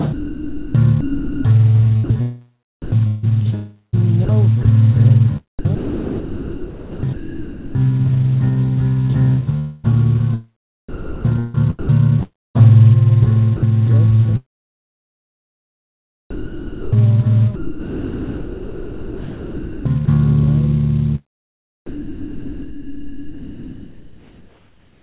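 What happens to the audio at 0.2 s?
At 0.2 s the audio sits inside a stretch of sound chopped by the voice detector, running from 0.09 to 4.65 s. About 1.8 s of that span is replaced by synthetic comfort noise, likely from the sender's detector gating on and off, so quiet edges drop out.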